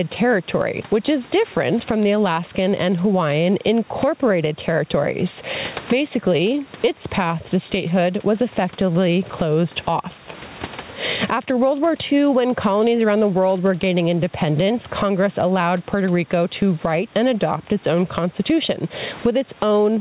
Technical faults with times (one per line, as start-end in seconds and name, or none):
0.00-20.01 gain pumping